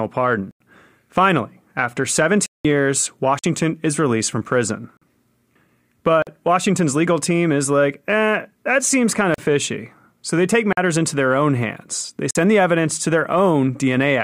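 The speech drops into blocks of digital silence eight times. The cuts fall at 0.51, 2.46, 3.39, 4.97, 6.22, 9.34, 10.73 and 12.31 s. Most last about 46 ms, which fits a 2048-sample block left unfilled. The 0.51 s hole runs 93 ms and the 2.46 s one 186 ms. The 9.34 s cut, after "eh that seems kind", lasts 37 ms. Another sits between "they take" and "into their own hands".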